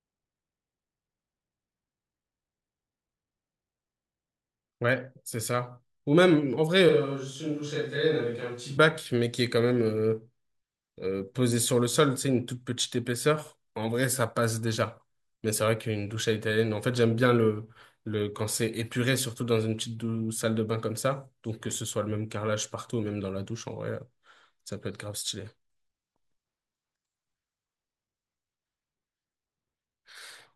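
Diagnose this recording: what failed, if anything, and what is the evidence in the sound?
Between 6.89 s and 8.77 s the speech abruptly goes roomy and hollow, thinner in the bass and about 5 dB quieter, with background noise sitting only around 35 dB below the speech. Then it snaps straight back. That reads as a switch to a distant microphone at the capture stage: the close mic's feed likely dropped out and a farther one, picking up far more room, filled the gap for those two seconds.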